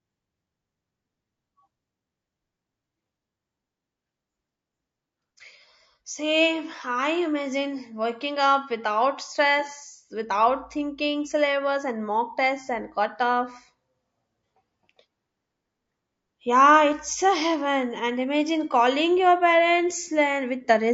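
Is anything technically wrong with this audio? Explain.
Yes, there are two problems.

Throughout the clip, the speech sounds rough and grainy. Noise sits between the pitch harmonics, and the top band sounds thin and synthetic. This is likely low-delay AAC compression, the AAC-ELD codec used in video calls. Its short frames resolve voice harmonics poorly and spend bits inefficiently. The damage is plainly audible. That points to a low bitrate, around 32 kbps.

From 12.65 to 12.68 s there is AAC frame loss with concealment. It falls between "thinking syllabus and mock" and "and cutoff". For about 30 ms the decoder lost its data and rebuilt the gap from the last good spectrum. It could not decode the real signal there. The patch sounds like a brief smeared, noisy or phasey spot. Its length fits a single lost frame.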